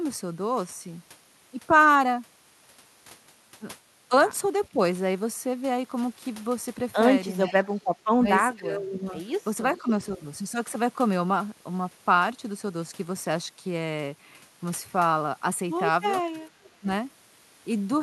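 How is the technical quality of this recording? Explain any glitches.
The recording has two recurring call-processing faults: speech suppressed in double talk and echo leak. Both come through a codec-coded call path whose top end stops around 12 kHz.

Speech suppressed in double talk happens at 4.69–4.79 s, 7.45–7.57 s, 8.16–9.13 s, 9.81–10.2 s and 16.33–16.87 s. When both ends talk at once, the echo canceller likely can't tell the local talker from loudspeaker echo, so it pulls everything down. The speech dips by about 10 to 20 dB. The longest stretch, near 8.2–9.1 s, is turned down for about 0.7 s in total.

Echo leak appears at 7.52–7.67 s, 9.74–9.91 s and 16.63–16.69 s. A loudspeaker-side echo canceller likely failed to remove all of the speech its microphone picked up, and sent the remainder back. The result is a faint copy of the voice trailing about 0.46 s behind. It is loudest at 9.74 s, about 15 dB under the speech. 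At the other two spots it is about 30 and 35 dB down, a brief ghost.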